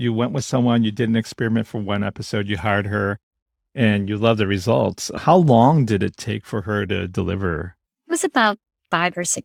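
No technical faults are audible.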